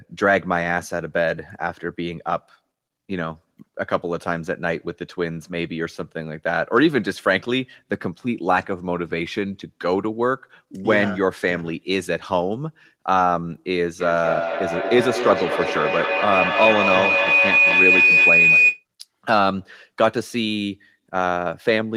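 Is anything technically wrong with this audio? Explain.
Yes. From 14.0 to 18.85 s there is feedback howl. Sound circles from loudspeaker back into a microphone with gain each pass, so unlike echo, whose repeats fade, it swells into a tone around 3 kHz. It pulses roughly five times a second and peaks about 4 dB above the speech.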